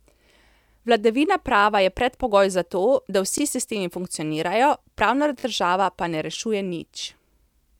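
New audio arrived late twice, so the playback device replayed its last buffer. Each repeated piece is about 20 ms long, which fits a 20 ms buffer. At 3.38 s, after "predpogoj za to da", one extra play makes a brief click-like stutter. At 5.40 to 5.44 s, between "funkcionirajo pravna" and "država pa ne rešuje", two extra plays give a slightly longer buzzy stutter with hard joins. No audio seems to be lost.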